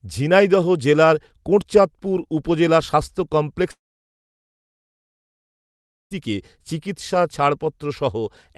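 A speech clip with a long network dropout from 3.71 s to 6.13 s, just after "জেলার কোটচাঁদপুর উপজেলা স্বাস্থ্য". The last sound smears into a brief fading buzz. Then about 2.3 s of near silence follows. The likely cause is packets that never arrived. The receiver stretched what it had, then gave up. Speech resumes with roughly 2.4 s simply gone. Throughout the clip, the top end stops near 12 kHz, which fits an Opus call codec at about 32 kbps.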